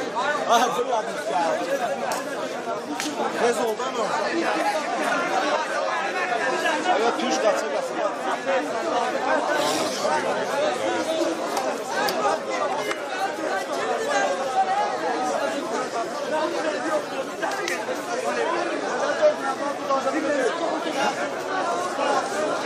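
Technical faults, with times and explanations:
6.09–6.12 s and 16.00–16.04 s, Bluetooth stutter: each time, one packet of about 23 ms arrived too late or not at all, so the receiver replayed its previous buffer. That repeated slice is heard as a brief stutter, and the sound then resumes further on, skipping the lost moment.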